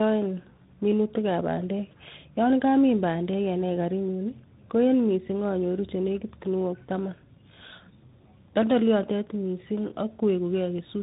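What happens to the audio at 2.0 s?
At 2.0 s the speech carries tandem speech coding, present throughout the clip: two speech coders in a row, likely AMR-NB then G.726. The second re-coded the first's degraded output, leaving rough, muffled, warbly speech. A spectrogram shows nothing above 3.8 kHz and smeared harmonics.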